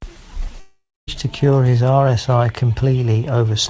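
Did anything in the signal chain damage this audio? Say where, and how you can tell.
Yes, likely a long network dropout from 0.60 to 1.09 s: the last speech is stretched into a fading buzz, then silence, before speech resumes without the lost part.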